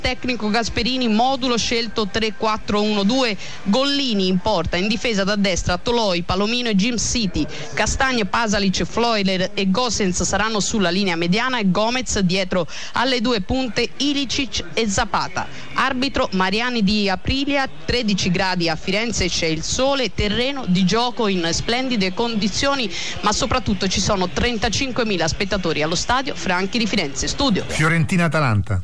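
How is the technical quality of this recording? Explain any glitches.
No technical glitches are audible.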